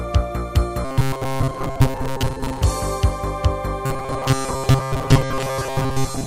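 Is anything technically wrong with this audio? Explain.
Yes, there's robotic sound from repeated short buffers in two stretches, from 0.85 to 2.61 s and again from 3.86 s right to the end at 6.26 s. The likely cause is new audio arriving too slowly, so playback keeps looping a tiny chunk of about 7.5 ms for most of that time and skips the real material. That loop stamps a fixed 133 Hz buzz onto everything, giving a stiff, metallic drone that only loosely tracks the underlying sound.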